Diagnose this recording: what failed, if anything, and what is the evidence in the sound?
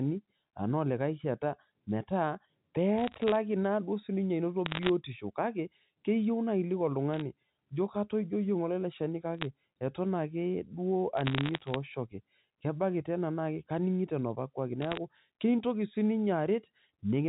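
The digital transmission stage failed: bit errors on a digital phone line corrupted individual G.711 mu-law samples in six bursts, at 2.98–3.36 s, 4.66–4.89 s, 7.14–7.21 s, 9.38–9.45 s, 11.17–11.76 s and 14.82–14.97 s. Each flipped bit throws one sample to a wrong value, and a hit on the sign or a high-order bit gives a sharp tick. Clustered together, these ticks form crackle laid over speech that is otherwise unchanged. The densest crackle is around 4.7 s, where the error rate is under one percent, and the longest burst is around 11.2 s.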